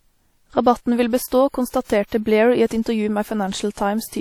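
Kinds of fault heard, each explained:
WMA compression: The whole clip has a ringing, washy texture, with a hiss that swells and fades along with the speech. That points to a transform codec at a low rate, likely WMA at something like 48 kbps. Content stops near 19.9 kHz.
pre-echo: From about 1.27 to 1.32 s, a smear of hiss leads into a sharp attack by roughly 45 ms. The codec spread noise meant for the loud onset back over the quiet moment before it, so the attack sounds soft.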